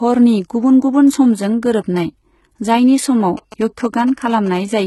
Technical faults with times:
0.00-4.87 low-bitrate audio saved at a high bitrate
3.37-4.80 GSM signalling bursts

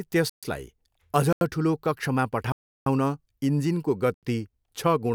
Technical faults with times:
0.30-0.43 block of digital silence
1.33-1.41 block of digital silence
2.52-2.86 block of digital silence
4.14-4.23 block of digital silence

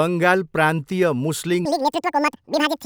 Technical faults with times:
1.65-2.85 audio read two samples at a time (double speed)

